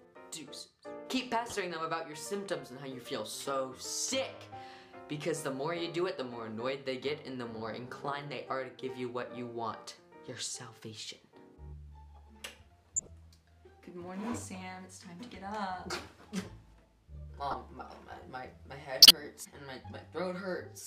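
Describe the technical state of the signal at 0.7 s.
At 0.7 s the signal is intact, with no audible fault at that moment.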